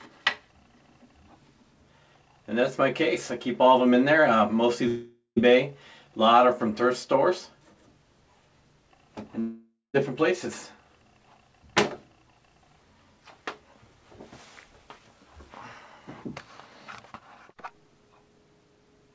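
Two gaps, at 4.88 to 5.38 s and 9.40 to 9.96 s, sound like a long network dropout: roughly 0.48 s and 0.54 s of audio are lost, the preceding sound smears into a fading buzz, then about 0.12 s and 0.18 s of silence before playback resumes further on. The likely cause is packet loss.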